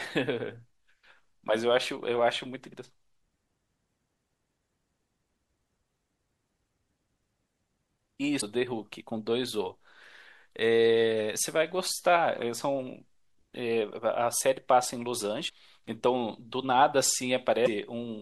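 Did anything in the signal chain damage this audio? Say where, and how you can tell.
Yes. Damaged data in a compressed stream, at the codec and storage stage: short glitches at 3.36, 8.37 to 8.43, 15.45 to 15.51 and 17.62 to 17.68 s. Corrupt bytes made the decoder misread frames, lose sync and jump to the next header.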